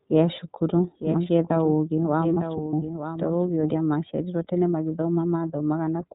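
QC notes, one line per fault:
throughout: iLBC codec. Speech sounds narrowband, slightly rough and synthetic, with nothing above 4 kHz; the plainly audible coding damage fits iLBC's 30 ms-frame mode at about 13 kbps.
2.34–2.38 s: lost iLBC frame. A brief held, faintly buzzy vowel-like sound as the decoder repeats the last pitch cycle mixed with noise to cover one missing 30 ms frame; speech recovers immediately.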